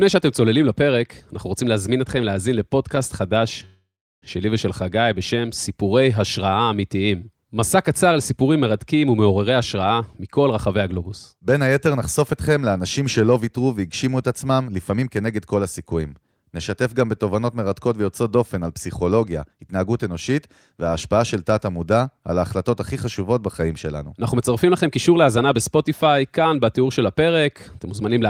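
At 3.65 to 4.24 s the speech stops moving forward in a call audio freeze, likely from delayed packets draining the jitter buffer. About 0.57 s of gap is inserted, with none of the speech lost. The last sound is drawn out as a fading buzz or hiss, then about 0.35 s of silence. A spectrogram shows harmonics flattening into a smeared band that fades to blank.

Jitter buffer speed-up follows at 9.51 to 12.33 s (107%), 14.62 to 15.80 s (108%), 19.44 to 20.05 s (110%) and 24.65 to 25.54 s (107%). Pitch-period slices were cut to shrink the delay, making the speech sound hurried at unchanged pitch. The spectrogram keeps its harmonic spacing while syllables compress in time.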